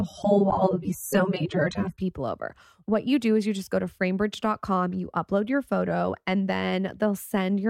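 From 0 to 2.0 s the speech plays as an adaptive stream starting at a low bitrate: dull, smeared treble and stronger codec artefacts, which fits roughly 24 kbit/s AAC. At 2.0 s quality jumps with no gap, unlike a rebuffer, to a band reaching 14.4 kHz.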